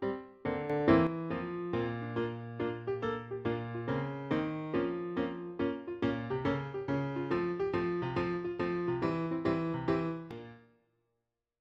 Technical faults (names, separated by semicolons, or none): sudden gain jump